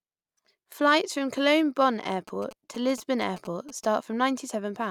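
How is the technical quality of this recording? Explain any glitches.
There's one glitch: GSM signalling bursts from 2.28 to 3.85 s, a galloping dit-dit-dit of short buzzes at about 217 Hz, sitting roughly 20 dB under the speech. A nearby 2G phone's radio bursts are being rectified somewhere in the audio circuitry and turned into audible buzzes.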